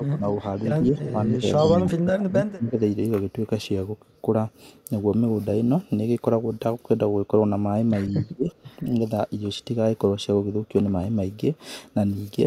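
A speech recording with two echo-canceller faults around moments when both ends of the call talk at once. Speech suppressed in double talk occurs at 0.0–0.43 s, 0.89–2.81 s and 8.32–8.88 s. The level sinks by about 10 dB in the first stretch and about 25 dB in the later two, for a few tenths of a second up to roughly a second in total. The waveform shows notched, hollowed envelopes, and the spectrogram shows faded or gapped upper bands. This is likely the canceller clamping down because it cannot tell the near talker from loudspeaker echo. Echo leak appears at 0.84–1.11 s, 1.56–1.82 s, 2.49–2.53 s and 8.11–8.32 s. Each is a faint copy of the voice trailing by 162 ms, about 15 to 35 dB below the speech. On a spectrogram it looks like ghost harmonic traces offset to the right. The likely source is one side's loudspeaker sound reaching that side's microphone and escaping cancellation.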